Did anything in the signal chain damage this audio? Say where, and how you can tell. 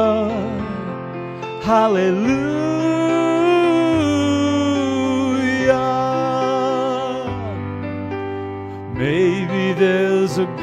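No, nothing in the signal chain stood out as causing damage when I listened to this audio.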